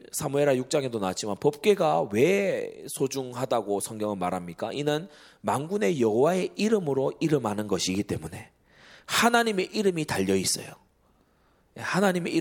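Speech recording, no technical faults detected anywhere in the clip.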